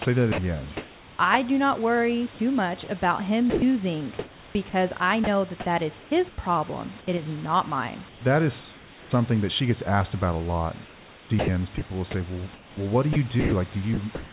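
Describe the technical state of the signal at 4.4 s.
At 4.4 s the audio sits inside a choppy stretch from 2.84 to 6.38 s, most likely sound chopped by the voice detector. About 750 ms of quieter syllables and word edges are swapped for comfort noise, while the real room noise sits about 22 dB below the speech. Unlike packet-loss concealment, the gaps hold steady noise rather than smeared or repeated speech, and they fall on soft passages rather than at random.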